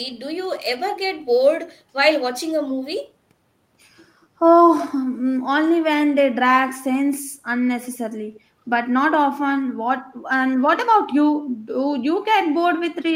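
At 7.88 to 7.97 s, and again at 8.33 to 8.4 s, a faint delayed copy of the speech appears. It trails by 181 ms and sits far below the speech. This is echo leak, likely a far-end echo canceller letting loudspeaker sound return.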